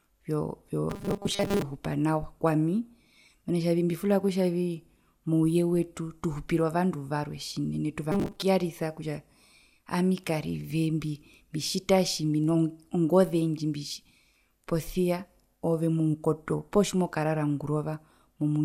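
From 0.90 to 1.62 s and again from 8.12 to 8.43 s, speech turns into robotic sound from repeated short buffers: a rigid metallic buzz fixed at 200 Hz, likely from 5 ms chunks looped while real audio was skipped. Unlike plain dropouts, the sound never falls silent.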